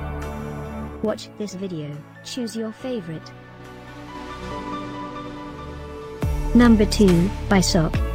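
From 0.84 to 1.2 s, zipper noise: the level falls roughly 15 dB in unsmoothed 3 dB steps, about ten per second, each ticking audibly; the waveform shows a staircase envelope with faint vertical click lines on the spectrogram.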